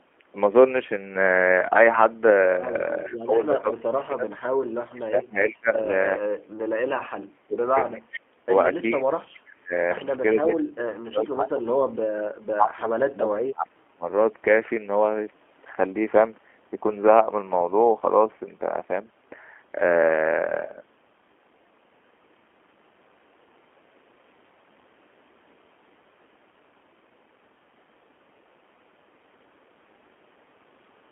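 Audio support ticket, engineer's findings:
G.729 codec, whole clip: 8 kbit/s, band-limited to 250 Hz–3.4 kHz, rough and synthetic. Spectrogram shows a hard ceiling near 3.4 kHz and an empty low end.

Speech suppressed in double talk, 3.04–9.74 s and 10.33–14.06 s: level dips up to about 35 dB in patches. Likely echo canceller ducking both talkers. Waveform envelope collapses in chunks.

Echo leak at 3.06–3.74 s, 5.49–5.54 s, 9.05–9.84 s and 11.2–11.34 s: faint copy 412 ms behind, about 20–35 dB down. Likely residual loudspeaker echo. Spectrogram shows ghost harmonics trailing the originals.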